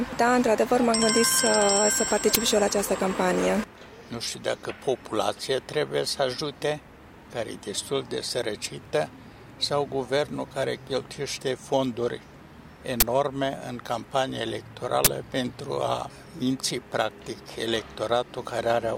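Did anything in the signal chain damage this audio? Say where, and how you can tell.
Yes. Three abrupt, loud bursts of digital noise appear at 2.35 s, 13.00–13.02 s and 15.04–15.07 s. This is an uninitialised buffer at the driver or buffer stage: blocks were played before audio was written, so leftover memory came out as samples. The burst lengths fit 512- and 1024-sample buffers.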